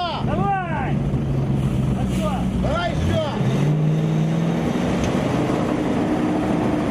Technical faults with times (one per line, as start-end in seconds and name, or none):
none